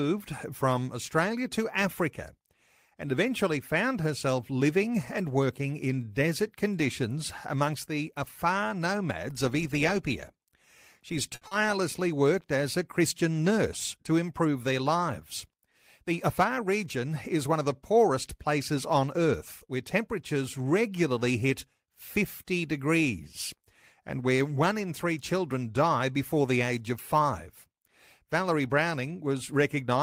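At 11.35 s there's a short stall from a late packet, running to about 11.43 s. A packet simply hadn't arrived when it was due, so the jitter buffer emptied and the receiver held the last sound for around 60 ms while it waited, then carried on from exactly where it left off. Nothing gets lost; you just hear that bit of speech stretched out a touch too long, with a faint buzzy quality to it.

Right after, from 11.47 to 11.53 s, comes a short concealed packet loss, just before "worked as a". This time about 60 ms of audio never made it to the decoder, and the receiver covered roughly 40 ms of that gap by extending the preceding sound before blending back into the real signal. What you get is a quick smear or wobble, and the timing pulls in a little as the delay that built up during the stall gets partly taken back.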